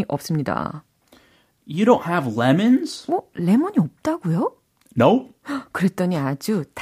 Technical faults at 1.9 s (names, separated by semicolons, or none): none